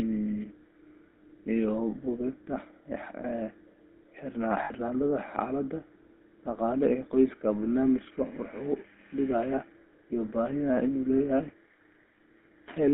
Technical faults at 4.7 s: GSM full-rate codec; lost GSM frames

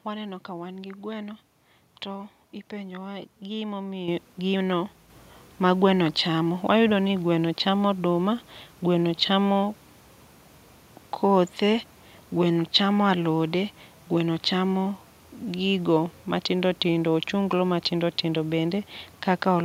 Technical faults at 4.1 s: microphone volume stepped up

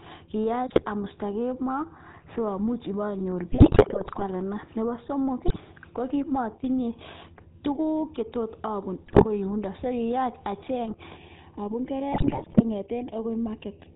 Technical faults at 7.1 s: GSM full-rate codec

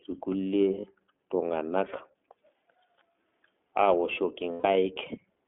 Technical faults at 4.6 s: iLBC codec; lost iLBC frames

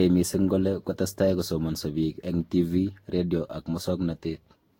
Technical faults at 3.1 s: generation loss

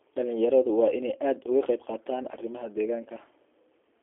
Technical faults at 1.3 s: G.729 codec

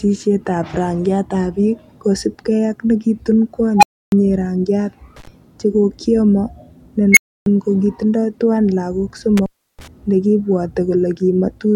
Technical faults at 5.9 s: none

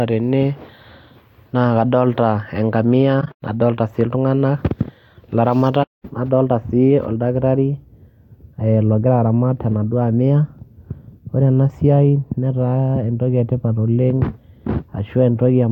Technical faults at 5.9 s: AAC frame loss with muting

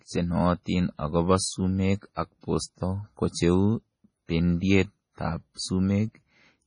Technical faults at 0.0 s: MP3 compression

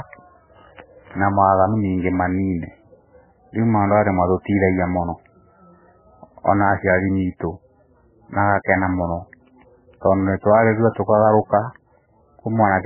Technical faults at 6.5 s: MP3 compression

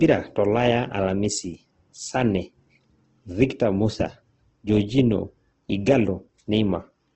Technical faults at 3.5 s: Opus compression

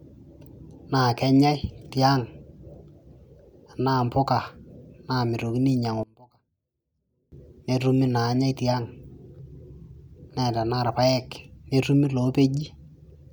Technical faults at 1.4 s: none

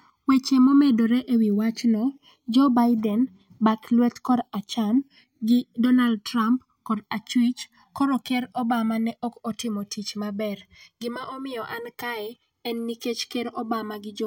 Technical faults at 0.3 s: channels drifting apart

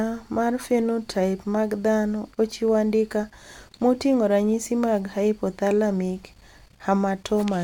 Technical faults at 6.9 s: none

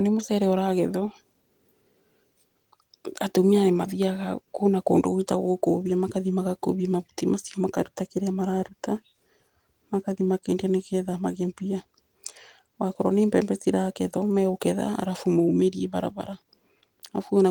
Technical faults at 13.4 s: none

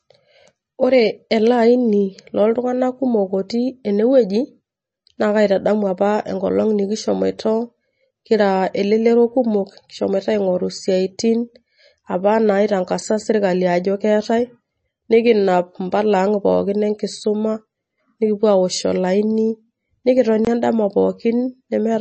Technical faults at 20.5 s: MP3 compression; block of digital silence

